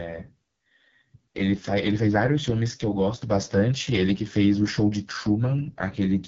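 From start to finish the speech carries AMR wideband (HD Voice) codec damage, heavy enough to fit its lowest 6.6 kbit/s mode. The pulse-driven model turns voicing rough and raspy. Unlike a plain low-pass, the top band hisses with synthetic noise before nothing remains above 7.4 kHz.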